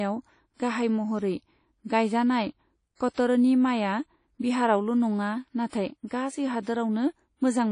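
Speech heard through WMA compression, likely at a low bitrate near 32 kbps: nothing survives above 10.1 kHz, and a washy, ringing hiss rises and falls with the voice. A spectrogram shows a flat ceiling at that frequency and speckled, patchy detail below it. Pre-echo smears two onsets, with a short hiss arriving about 39 ms early at 6.07 s and about 55 ms early at 6.61 s. Each waveform shows low-level noise creeping up before the attack, where the codec's long block spread its quantisation noise backwards.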